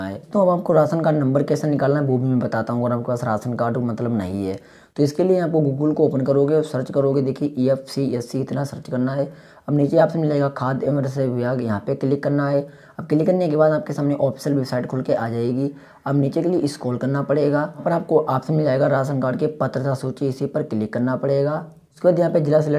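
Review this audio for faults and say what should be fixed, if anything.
Nothing needs fixing: the signal holds steady throughout, with no interruptions, level problems or added disturbances anywhere in the recording.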